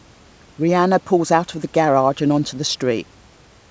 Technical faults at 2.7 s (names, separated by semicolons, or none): none